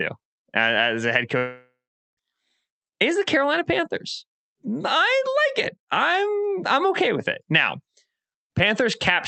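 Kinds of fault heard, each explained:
long network dropout: from 1.37 to 2.19 s the speech turns into a fading buzz, then about 0.42 s of silence, likely from 0.8 s of audio lost in transit.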